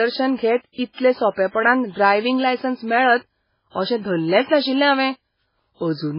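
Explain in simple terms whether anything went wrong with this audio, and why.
MP3 compression runs through the whole clip. The speech sounds dull and watery, with nothing above 5.3 kHz. This is likely heavy MP3 encoding cutting treble and quiet detail to save space.

Pre-echo appears at 0.72 s and 0.92 s. A short hiss of 58 ms and then 56 ms comes just before sharp sounds, the second leading into "सोंपेपणान ड्रायविंग लायसन्स मेळत". The codec spreads noise across a whole block, so it spills ahead of each attack.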